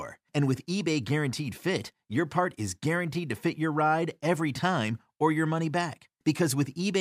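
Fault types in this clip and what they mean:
No fault types are present in this clip.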